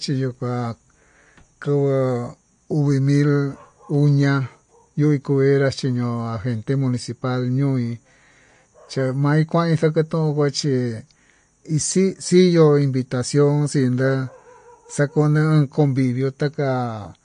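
The speech was likely squeezed through MP3 compression at a low bitrate, plainly audible from start to finish and consistent with roughly 45 kbps. The encoder discarded everything above 9.8 kHz, leaving the speech dull, with weak detail flickering in and out and a watery, swirling texture.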